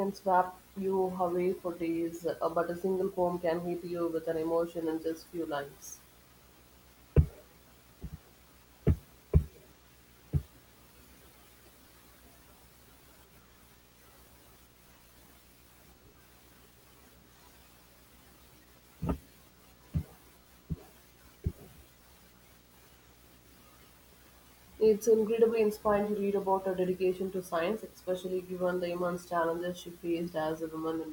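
From start to finish, a screen or video cable is coupling into the audio path, producing video or display buzz: a steady 59.94 Hz buzz at the picture's field rate, hash above it, and a thin 15.7 kHz line-rate whine, all sitting about 30 dB beneath the speech.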